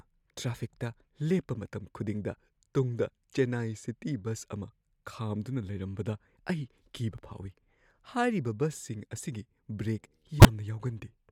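A speech clip with a corrupt frame decoded from 10.39 to 10.48 s: damaged bits in a few consecutive compressed frames were played anyway, spraying energy to wrong frequencies as a loud error peaking around -5 dBFS. Unlike a dropout, the damaged frames weren't simply discarded.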